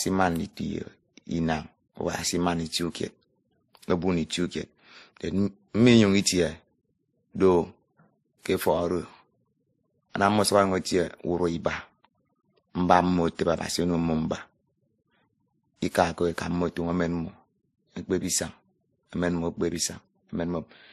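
Across the whole speech clip, the audio was likely passed through a low-bitrate MP3-style encoder and then re-encoded as WMA, which is transcoding between lossy codecs. Nothing survives above 15.2 kHz, and the first codec's artefacts are heard together with the second codec's own.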